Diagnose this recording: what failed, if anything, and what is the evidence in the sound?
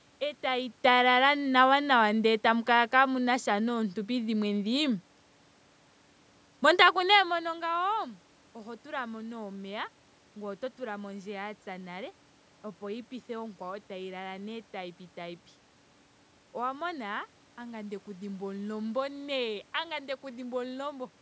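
Nothing failed in this recording, and the sound holds no evidence of a fault at any stage.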